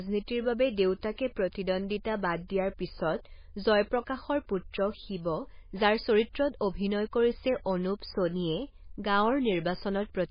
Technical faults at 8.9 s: MP3 compression

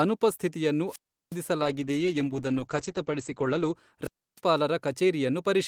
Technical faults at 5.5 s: none

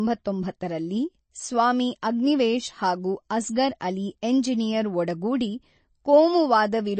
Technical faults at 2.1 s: MP3 compression

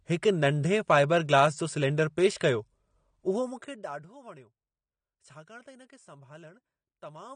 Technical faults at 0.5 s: AAC compression

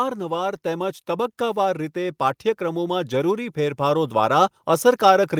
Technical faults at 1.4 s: automatic gain rising

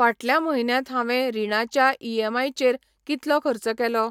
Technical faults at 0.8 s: none

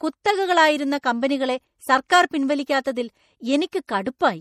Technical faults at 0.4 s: MP3 compression

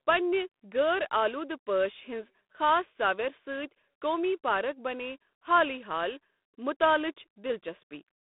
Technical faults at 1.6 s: G.726 ADPCM

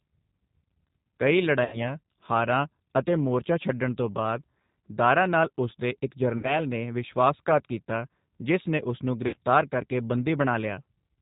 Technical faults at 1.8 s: G.729 codec; VoIP packet loss concealed by the speech codec

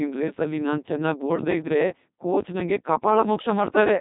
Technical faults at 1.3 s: Codec 2 vocoder; periodic USB or driver dropouts

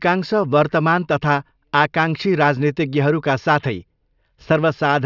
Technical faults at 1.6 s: none

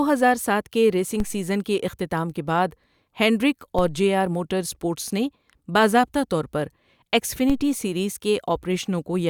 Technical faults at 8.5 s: none

